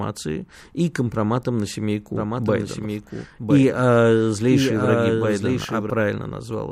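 From 2.16 s to 5.90 s, just after "и компроматом на", the speech carries a doubled audio track. A dry, full-band copy trails about a second behind at roughly 5 dB lower, starting and stopping abruptly, likely from a second, slower capture path.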